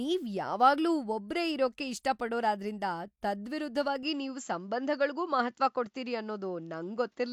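The recording input was likely switched to a poorer device partway through this speech clip, at 4.03 s, and the lower-quality path continues to the end. From that point nothing above 7.6 kHz gets through, so the speech loses its airy top end and sounds duller. The change happens with no gap and no obvious jump in loudness, and a faint new background noise appears, sitting far below the speech.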